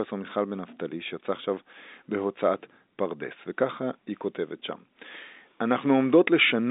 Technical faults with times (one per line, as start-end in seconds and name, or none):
none